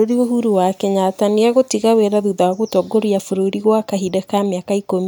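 No technical faults turn up anywhere in this speech recording, so there's nothing to walk through in time order.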